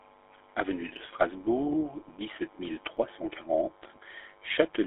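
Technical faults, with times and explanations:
Throughout, GSM full-rate codec: the sound has the gravelly, buzzy roughness of a vocal-tract model driven by sparse regular pulses, which fits 13 kbps GSM full rate. The audio sits in a 300 Hz to 3.5 kHz telephone band with nothing above 3.8 kHz, and the damage is plainly audible.
0.97 s and 2.97 s, overlapping chunks: at each join, 2.0 s apart, a new chunk starts slightly before the previous one ended. That replays a 7.07 ms sliver, heard as a brief click or stutter recurring at that regular interval.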